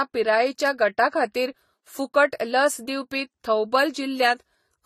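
Throughout the speech, nothing reaches above 14 kHz, and two layers of coding artefacts sit on top of each other, the different artefacts heard together. This points to transcoding between lossy codecs, likely an AAC-LC encode at around 32 kbit/s that was later re-encoded to Vorbis at about 36 kbit/s. The second encoder spent its scarce bits reproducing the first one's damage while adding its own.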